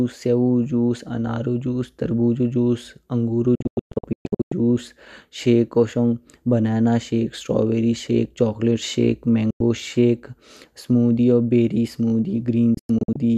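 Digital broadcast dropouts cut the speech to abrupt silence where received frames failed: scattered holes across 3.55–4.52 s, a 96 ms gap at 9.50 s, and more holes across 12.74–13.18 s.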